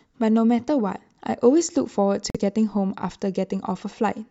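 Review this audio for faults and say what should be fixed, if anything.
At 2.30 s the speech drops out abruptly, with about 46 ms of dead silence inside a brief disruption that runs to 2.37 s, before the sound continues. This is a Bluetooth stall, likely caused by radio interference holding up packets on the wireless link: the headphones' small playback buffer emptied before retransmitted data could arrive, so output simply halted until it caught up. Keeping the phone close, reducing 2.4 GHz congestion, or using a larger receive buffer would prevent it.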